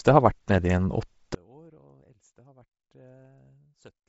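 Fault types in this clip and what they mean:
Bluetooth LC3 compression: Throughout, the speech has a breathy, grainy edge and nothing above 7.8 kHz, with heavy codec damage. This is likely LC3 at a low rate, consistent with about 24 kbps and 7.5 ms frames, where sparse upper bands are filled with noise.
One channel inverted: From 1.35 s to the end, the speech nearly disappears, dropping by about 33 dB. The likely cause is one stereo channel with reversed polarity, so the shared centre content cancels in a mono sum, leaving only the faint difference between channels.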